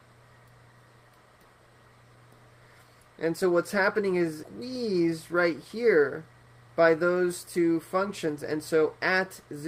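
Around 4.61 to 5.35 s and again from 5.76 to 6.68 s, the audio briefly runs faster at unchanged pitch, about 4% then 6% faster. This is a jitter buffer speed-up: the receiver trimmed short pitch-period slices to drain excess buffered delay, a few tens of milliseconds each time.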